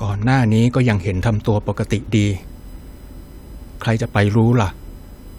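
From 2.33 s to the end of the speech, a USB whine sits under the audio. It is a fixed-pitch tone on a 1 kHz series, strongest at the 19 kHz harmonic, roughly 40 dB below the speech. The bus's 1 ms frame current is leaking in through power or ground.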